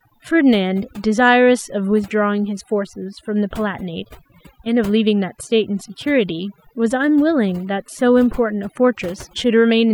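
Overdone noise removal runs through the whole clip. A noise reduction stage was pushed far too hard on a noisy recording, so any frequency band that sits close to its noise estimate gets pulled almost to nothing, taking the quieter parts of the speech with it. Between phrases the background drops to near silence scattered with twinkling, warbling specks.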